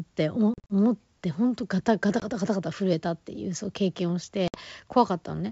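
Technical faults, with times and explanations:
0.54–0.73 s, 2.20–2.24 s, 4.48–4.59 s: packet loss on an ADPCM call. Silent gaps totalling 120 ms, 20 ms and 60 ms, the first scattered with 40 ms at most, show as hard-edged blank spectrogram columns. Mismatched ADPCM predictor state leaves the speech slightly distorted briefly afterward.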